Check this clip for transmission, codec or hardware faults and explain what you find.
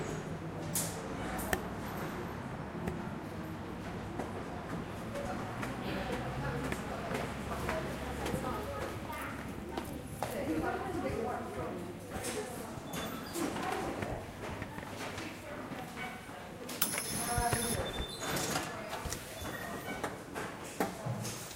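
Nothing in the recording points to a transmission, codec or hardware fault. The sound holds steady throughout, with nothing that needs explaining.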